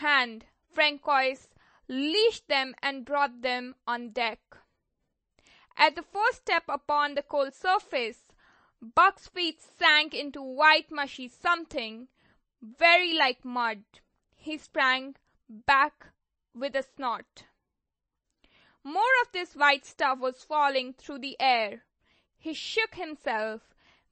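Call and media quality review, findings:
Speech, whole clip: no content above 8.4 kHz, hard treble ceiling. Watery, swirly texture, chirpy metallic sibilants, smeared consonant attacks, plainly audible throughout. Likely cause: MP3 compression at a starved bitrate; damage level points to around 30 kbps. Mechanism: encoder discards the top band at a fixed cutoff and zeroes quiet spectral lines, which flicker in and out between frames.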